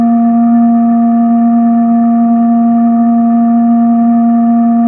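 No technical faults can be heard in this music clip. Nothing in its course calls for a time or a value to be noted.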